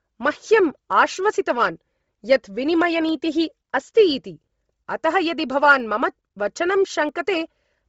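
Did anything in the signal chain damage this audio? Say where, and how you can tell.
Yes. At the codec stage, the whole clip carries heavy damage that is likely Bluetooth LC3 compression. The speech has a breathy, grainy edge where the upper band has been replaced by shaped noise. That fits a low bitrate around 24 kbps with 7.5 ms frames. A plain low-pass filter or a low sample rate would cut the top just as cleanly but would not add this noisy texture.

Four dropped samples, likely from the driver or buffer stage, each sound as a single sharp click: at 1.17 s, at 3.09 s, at 5.80 s just before "मम वचनं", and at 7.09 s just after "मम वचनं". Each removes only a tiny fraction of a millisecond, so the waveform steps abruptly to a later value and nothing audible goes missing. A dropout or lost packet would instead leave an audible gap in the sound.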